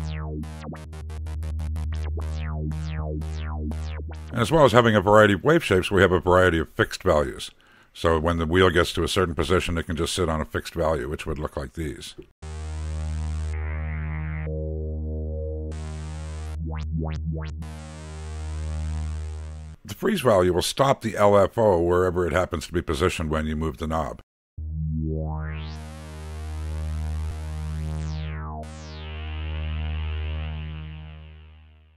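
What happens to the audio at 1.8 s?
Nothing goes wrong at 1.8 s; the audio carries on intact through that moment, with no dropout, click, glitch or other fault.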